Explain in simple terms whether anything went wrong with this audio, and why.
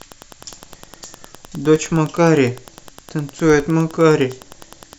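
Wi-Fi interference runs through the whole speech recording: a faint, steady ticking about ten times a second. A nearby Wi-Fi radio sends a short signal every 102.4 ms, and the audio circuitry picks it up and turns it into audible clicks.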